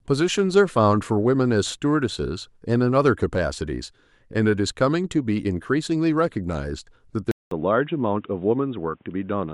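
At 7.31 s the speech drops out for 0.2 s, then runs dull and boxy, nothing above 3.8 kHz, with faint new noise at the same loudness. That gap and noise, not just lost treble, mark the input likely switched to a poorer device.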